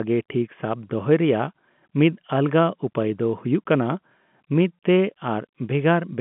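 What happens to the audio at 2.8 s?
Nothing goes wrong at 2.8 s: the speech carries on intact through that moment, with only the narrow band of the G.711 telephone coding it has throughout.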